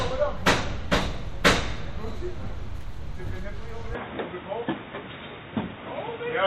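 At 3.95 s the recording system most likely switched its input to a poorer device, and that device carries on to the end. From that point the sound is cut off above about 3.8 kHz, so it turns abruptly dull and boxy, losing its upper detail. The changeover has no gap, and the loudness stays about the same. A faint new background noise also appears, sitting roughly 40 dB below the sound.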